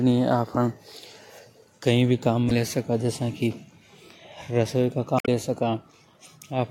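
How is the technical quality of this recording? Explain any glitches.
The speech is marred by two short glitches from damaged data in a compressed stream, at 2.47 to 2.52 s and 5.16 to 5.28 s. Corrupted bytes make the decoder misread frames and hunt for the next valid header, producing brief chirps, squawks, clicks or short holes that show as broadband smears or abrupt waveform discontinuities.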